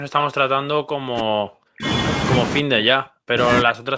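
An echo canceller, likely unable to tell the near talker from loudspeaker echo, turned the speech down as speech suppressed in double talk. From 0.5 to 1.86 s, 2.61 to 3.37 s and 3.63 s to the end, speech dips by as much as about 40 dB.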